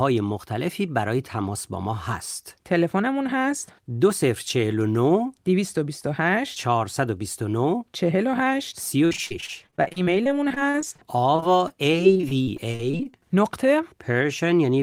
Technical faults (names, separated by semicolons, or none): repeated packet loss (robotic sound)